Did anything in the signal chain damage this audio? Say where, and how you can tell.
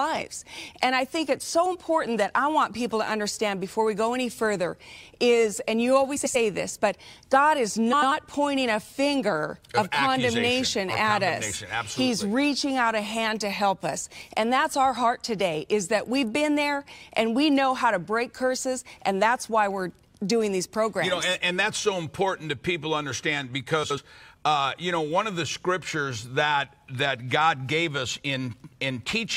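Yes: frames out of order, introduced at the network or jitter-buffer stage. At 6.16–6.36 s, 7.93–8.12 s and 23.83–23.98 s, the sound flutters briefly, as two adjacent blocks of about 93 ms (70 ms in the last) play swapped. Unlike packet loss, no time vanishes and no gap appears.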